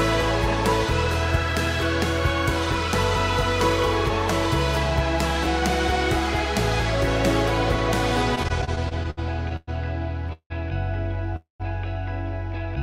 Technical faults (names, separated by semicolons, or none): repeated stalls (stutter); call audio freeze